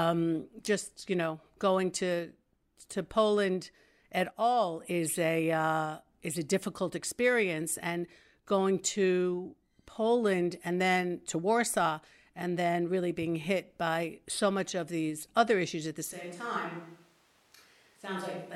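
At 16.13 s, right after "other issues at the", the speech abruptly turns roomy and hollow and stays that way to the end: a switch to a distant microphone, likely because the close microphone's signal dropped out. The level falls by about 10 dB, bass thins, and room noise rises to roughly 30 dB below the speech. On the waveform the envelope steps down sharply; the spectrogram shows weaker low frequencies, smeared reverberant tails and a lifted noise floor between phrases.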